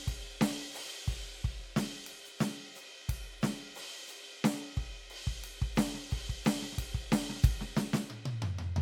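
A music clip with generation loss throughout: the sound is swirly, hollow and smeared, with blurred attacks, more degraded than a single MP3 pass at around 97 kbit/s would explain, and likely caused by about three successive re-encodes. The spectrum still extends to 20.1 kHz.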